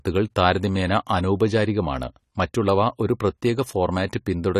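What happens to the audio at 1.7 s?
At 1.7 s you're hearing the same AAC compression damage that runs through the whole speech clip: nothing above about 14.1 kHz, a dull, smeared top end and fizzy sibilants. It's likely AAC-LC at a low bitrate, which fits something around 32 kbps, where coarse quantising leaves spectral holes.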